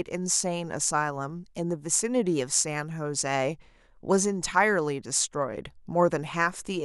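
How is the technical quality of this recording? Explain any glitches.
No glitches turn up anywhere in this speech recording. Nothing in it stands out as a technical problem to explain.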